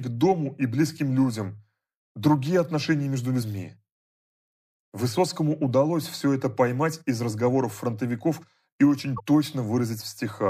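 At 3.39–3.43 s and 9.16–9.20 s, damaged data in the compressed stream garbles the decoded frames into a brief chirp, squawk, click or short hole.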